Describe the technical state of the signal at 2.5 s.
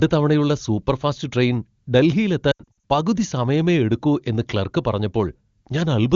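Lost AMR speech frames occur from 2.51 to 2.84 s, just before "പകുതി സമയമേ എടുക്കൂ എന്ന്". Radio errors corrupted frames, so the decoder repeated the last good pitch and vocal tract settings at falling gain. About 220 ms is lost over 320 ms, with runs up to 80 ms, heard as stuttering dips and brief smeared fades.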